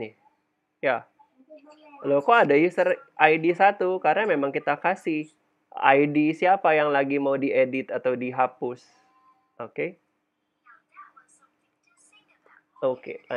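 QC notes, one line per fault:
No faults were found in this clip.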